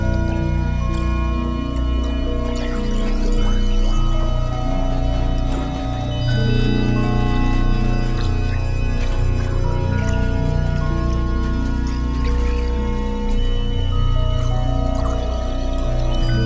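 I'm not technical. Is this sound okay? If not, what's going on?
Yes, this sound is okay; nothing is going wrong in it.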